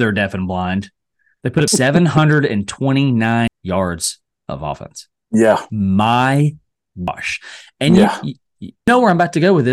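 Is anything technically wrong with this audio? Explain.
Yes. The speech skips forward at 1.68, 3.48, 5.28, 7.08 and 8.88 s, a pattern of audio missing between chunks. Each time, about a fifth of a second vanishes and the two sides butt together with no gap, so the flow jumps. The steady 1.8 s spacing fits a recorder likely working in 2-second chunks and dropping a piece at each handover. On a waveform or spectrogram, the envelope and harmonics change abruptly at each splice, with no silent stretch.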